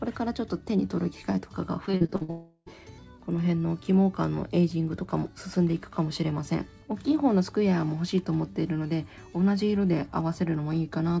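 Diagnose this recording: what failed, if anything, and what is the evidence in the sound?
Choppy, robotic stutter from 1.86 to 2.30 s, with six short holes up to 57 ms patched by repeated sound: repeated packet loss on the network.

From 2.30 to 2.68 s the sound smears into a fading buzz, then briefly goes silent before resuming with a piece missing, likely a long network dropout.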